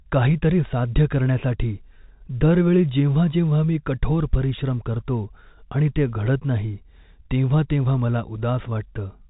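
Nothing stood out on listening to this telephone-band speech, which carries the expected G.711 mu-law sound with nothing above about 3.8 kHz.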